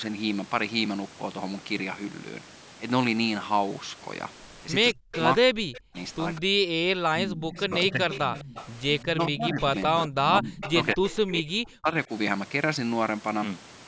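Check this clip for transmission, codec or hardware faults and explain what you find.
Two faults are present: speech suppressed in double talk, and echo leak. Both point to a call with a loudspeaker on the far end.

From 4.93 to 12.1 s the speech is suppressed in double talk. The level drops by as much as about 40 dB at its deepest. About 5 s in total are affected. The voice dips, thins or breaks into pieces. This is likely an echo canceller meeting both sides talking at once. It cannot tell the local talker from loudspeaker echo, so it turns everything down.

Echo leak appears at 5.13 to 5.19 s, 7.55 to 9.05 s, and 9.61 to 11.15 s. A faint copy of the speech trails it by 210 ms. It sits about 15 dB below the direct sound. The first instance is a brief scrap. The later two are longer stretches. The likely cause is a far-end echo canceller that missed part of what its microphone picked up from the loudspeaker, and sent that residue back.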